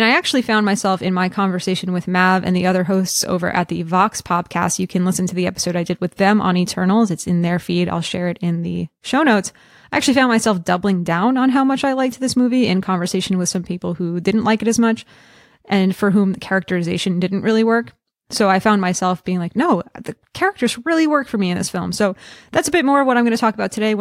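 Nothing technically wrong turns up anywhere in this speech recording, so there's no fault here to point to.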